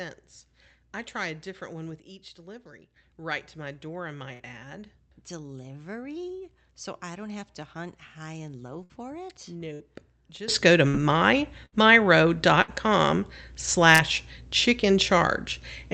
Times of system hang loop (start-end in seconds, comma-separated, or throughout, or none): none